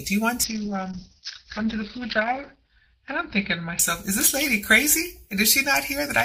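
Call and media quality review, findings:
Call bitrate drop, 0.46 to 5.83 s. Audio turns rough and muffled, top end gone above 6 kHz against 20 kHz before. Worst stretch lasts about 2.05 s. Component: Opus encoder under bandwidth-estimate control. Mechanism: estimate collapsed, encoder coded coarsely and narrowed bandwidth, consistent with a fall from 128 kbps to 8 kbps. Recovers before end.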